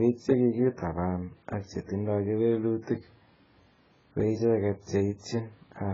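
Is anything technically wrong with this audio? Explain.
Yes. The speech carries heavy compression damage from start to finish, most likely AAC compression. Nothing is heard above 7.6 kHz, so the top end is dull and closed in. The encoder works in blocks of frequency lines. With too few bits, it drops the highest bands and starves others. This fits a very low bitrate, around 12 kbps. Gaps and smearing appear across the spectrum. Sibilants turn fizzy, and held sounds warble.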